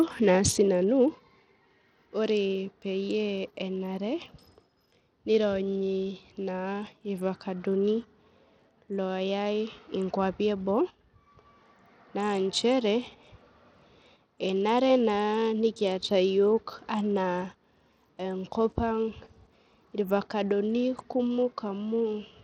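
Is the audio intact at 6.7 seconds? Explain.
No. At 6.7 seconds, as throughout the clip, the speech carries the marks of what is likely Bluetooth SBC compression, with damage that is plainly audible and points to a starved bit pool near 80 kbps. SBC divides the signal into a few wide sub-bands and shares out bits without any model of hearing, so the weak upper bands get little or nothing. The treble thins out and flickers, and a gritty, aliased roughness rides on the voice.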